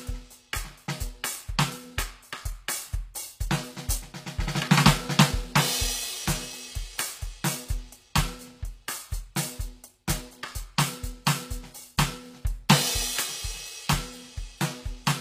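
All the way through, the music has plainly audible codec damage: the top end sounds bright but synthetic, with cymbals and sibilant edges turning gritty and metallic, and nothing at all above 15.5 kHz. That's most likely HE-AAC compression, fitting a low bitrate around 24 kbps in the v2 flavour. The codec keeps only the lower spectrum properly and fakes the treble by copying lower bands upward, so the rebuilt harmonics don't line up with the real ones.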